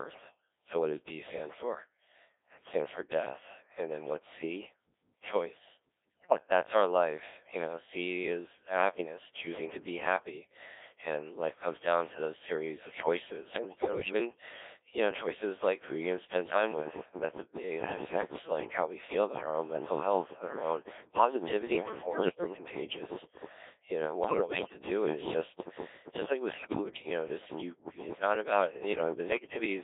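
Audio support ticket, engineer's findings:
Codec 2 vocoder, whole clip. Speech robotic and buzzy, squeezed into roughly 300 Hz to 3.6 kHz, damage heavy. Only pitch, voicing, energy and spectral envelope survive; decoder rebuilds the voice from sine waves, so no real waveform left. Sound fits the 1.3 kbit/s mode.

Bit errors on digital voice radio, six bursts: 6.07–6.38 s (just before "that's our life you"), 13.52–14.13 s (right after "to those series of"), 21.72–22.58 s, 24.24–24.82 s, 26.52–27.02 s, 29.32–29.66 s. Pitch, level and tone jump into warbles and gibberish. Flipped bits, somewhere around 5 to 15 percent, corrupt per-frame parameters for whole frames. Highest error rate, about 15 percent, around 24.2 s.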